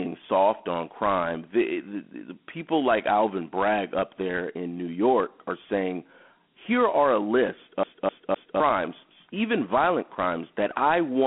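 Across the whole speech clip runs Dialogic VOX ADPCM damage. The 4-bit coding at 32 kbps fits 8,000 samples a second, so the band is narrowed to the 200 to 3,400 Hz line band, with nothing above 3.9 kHz. A gritty hiss rides on the speech. A spectrogram shows a hard ceiling near 3.9 kHz and grainy noise rising and falling with the speech energy.

From 7.83 to 8.6 s, just after "here are a list", the clip behaves like a CD stuck on one turn. A 0.26 s stretch plays three times in a row, as if a scratch kept throwing the pickup back to the same point, with a brief mute at each jump. This gives a fast, even stutter. The waveform shows identical blocks repeating, separated by small silent gaps.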